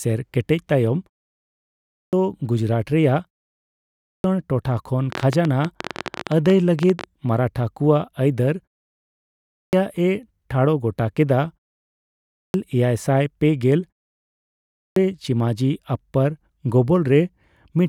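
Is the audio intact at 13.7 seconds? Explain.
Yes, the speech is intact at 13.7 seconds, with no fault at that moment.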